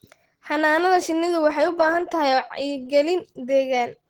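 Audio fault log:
throughout, Opus compression. The speech sounds muffled and hoarse, with a rough, grainy texture rather than swirling artefacts. The damage is plainly audible. Content extends up to 20.1 kHz, so the band stays fullband, but the top lacks fine detail. The cause is likely low-rate Opus in its hybrid speech mode. The encoder holds each band's overall energy but has too few bits for fine structure, which fits a bitrate near 16 kbps.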